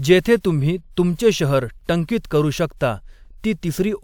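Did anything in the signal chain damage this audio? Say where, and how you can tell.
No, nothing along the chain from capture to playback audibly damaged this speech recording.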